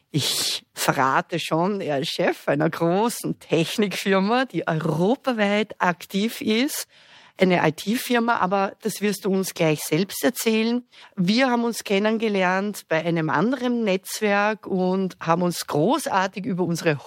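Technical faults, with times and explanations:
No technical faults can be heard anywhere in the audio. There is nothing here that calls for a time or an explanation.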